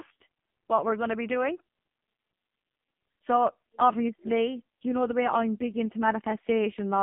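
Throughout, the speech has passed through the AMR narrowband mobile codec at a very low bit rate, which fits its 5.15 kbps mode. The line keeps only 150 Hz to 3.6 kHz, and the sparse, pulse-driven vocal-tract model leaves the voice thin, heavily buzzy and synthetic.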